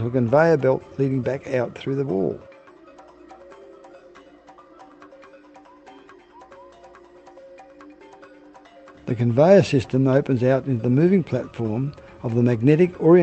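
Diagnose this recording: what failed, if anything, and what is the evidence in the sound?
Nothing has failed: the signal shows the ordinary character of a call path working as intended, with its high-frequency content ending at about 8 kHz, consistent with an Opus link running at around 32 kbps.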